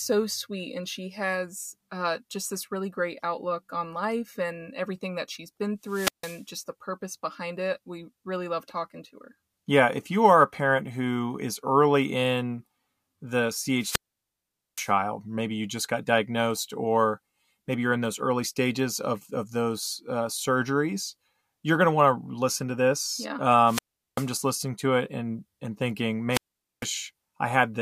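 Wireless microphone squelch dropouts occur at 5.82–6.45 s (mute about 154 ms), 13.77–14.93 s after "is early in the" and before "maybe you just got" (822 ms), 23.65–24.28 s before "just listening to it" (388 ms), and 26.30–26.87 s after "it and and thinking" (452 ms). Each time, the FM link fades and the receiver's squelch cuts the output. Unlike a digital packet dropout, each hole is preceded by rising hiss.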